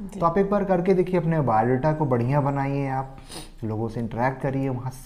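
Nothing in here trips the ear at all, just a steady run of sound with no dropouts, clicks, glitches or odd jumps anywhere along the way.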